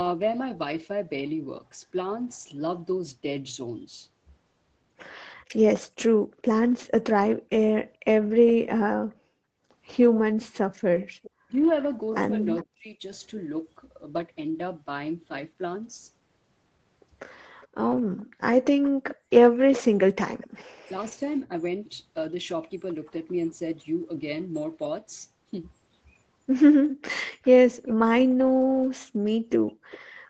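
From 10.4 to 12.64 s an echo leak brings back a faint copy of the sound about 400 ms late, about 25 dB down. The far end's echo canceller likely missed loudspeaker pickup. Speech suppressed in double talk follows from 11.46 to 13.02 s. The talker dips by roughly 35 dB in pieces, likely because the canceller mistook them for echo. The echo leak returns from 17.61 to 20.64 s, louder at about 15 dB down, with a similar delay near 400 ms. From 20.67 to 20.86 s the background is gated by the echo canceller. The room sound drops by about 40 dB, then returns. Double-talk suppression recurs from 20.88 to 21.52 s, with brief dips of roughly 10 dB. The echo leak reappears from 26.88 to 27.93 s at about 15 dB down, and again briefly from 29.91 to 29.99 s at about 25 dB down.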